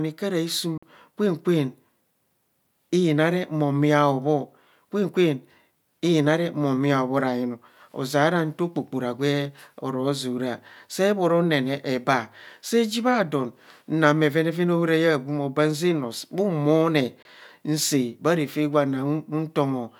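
At 0.78 to 0.83 s and again at 17.22 to 17.25 s the speech cuts to silence, about 46 ms then 23 ms, and picks up further along. That's likely a Bluetooth dropout, with late packets discarded, two and then one.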